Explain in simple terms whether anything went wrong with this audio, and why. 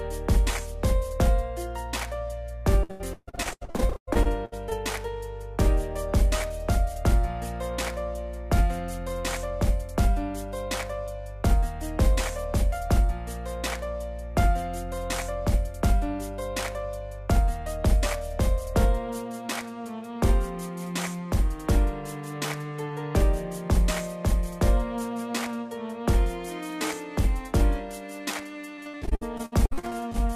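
Repeated packet loss (robotic sound) hits twice, from 2.83 to 4.73 s and from 28.75 to 30.16 s. Bits keep dropping out and get patched over, so the sound turns choppy and robotic.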